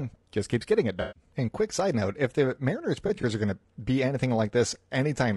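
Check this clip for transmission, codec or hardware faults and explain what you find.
Two faults are present: codec damage across the whole speech clip, and two patches of frame loss.

Low-delay AAC compression runs throughout. The voice is rough and grainy. Noise fills the gaps between the pitch harmonics, and the top band sounds thin and synthetic. This is likely AAC-ELD, the low-delay codec of video calls. Its short frames resolve harmonics poorly and spend more bits. The damage is plainly audible, which fits a bitrate around 32 kbps.

AAC frame loss with concealment occurs twice. From 1.01 to 1.23 s, about 140 ms of audio is missing. The decoder repeats the last good spectrum with scrambled phase, giving a smeared, phasey patch. From 3.07 to 3.24 s, 60 ms of loss is scattered over about 160 ms. The longest gap is roughly 20 ms. Each gap makes a brief noisy patch.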